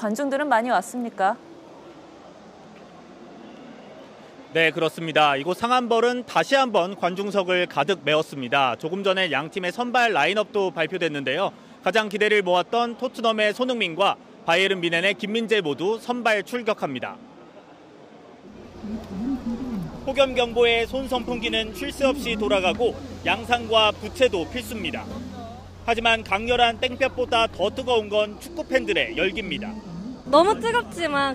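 Nothing in this recording stands out as a technical problem; there's nothing here to flag or explain.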